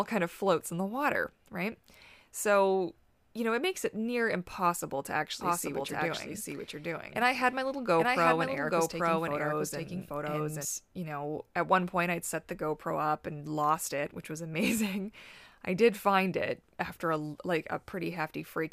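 From 5.41 to 10.65 s, after "it near impossible to" and until "you know at one", a doubled audio track appears. A full-band copy trails by roughly 0.7 s at about equal loudness, likely from a second, slower capture path. Unlike an echo, it has no decay or room colour and switches on and off abruptly.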